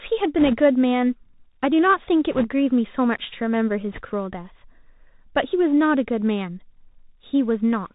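Bluetooth CVSD headset codec, throughout: the speech passes through a one-bit delta coder whose adaptive step lags loud high sounds, so those distort; everything above 4 kHz is gone, s sounds rasp, and a grainy hiss sits underneath.

Bit errors on a Bluetooth voice link, at 0.40–0.57 s, 2.32–2.47 s and 3.93–4.02 s: a few percent of bits flip, and each error fades quickly, so these bursts add brief rushing crackle rather than sharp clicks.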